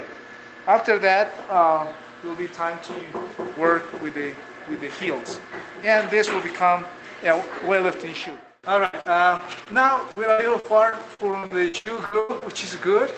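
Repeated packet loss (robotic sound) hits the audio from 8.85 to 12.54 s. Audio packets kept dropping or arriving late, and each hole was patched by extending the previous sound. Across well over a dozen gaps, the longest 92 ms, about a fifth of that stretch and around 0.7 s in total was concealed rather than received. The result is a choppy, robotic texture with pieces missing. The audio also passes through a call codec whose top end stops near 8 kHz, which fits Opus at a modest call bitrate.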